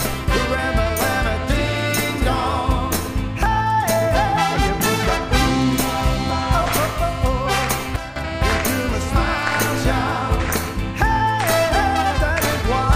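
At 7.96 s the digital gain likely stepped from one sample to the next with no ramp, the kind of change a setting or bit shift applied in a single step produces. The result is a sudden gain jump: the sound and its background noise drop together by about 12 dB, with an abrupt edge that can carry a click, and stay at that lower level until 8.16 s, when they return.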